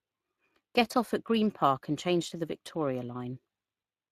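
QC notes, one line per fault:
Throughout, Speex codec: the encoder's bit budget, consistent with a mid-rate setting near 22 kbps, starves the excitation, making speech hoarse and noisy, with hissy highs and nothing above 15.3 kHz.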